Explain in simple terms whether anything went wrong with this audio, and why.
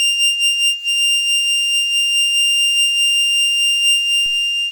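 A DC step hits at 4.26 s, near the very end of the music. The waveform's resting line, its idea of silence, suddenly jumps to a new level, as if an input carrying a small offset had been switched in. That abrupt shift is heard as a short low thump, while the music itself carries on unchanged. Afterwards the offset doesn't stay put but slowly drains away, easing back toward zero over the following moments.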